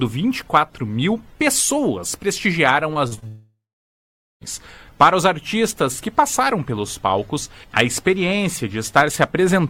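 From 2.93 to 3.24 s, repeated packet loss gives a choppy, robotic texture: several short holes, none over about 38 ms, each patched by stretching the previous sound. Then, from 3.28 to 4.43 s, a long network dropout is the likely cause of a fading buzz that gives way to roughly 0.8 s of silence, unlike the brief repeated gaps before it.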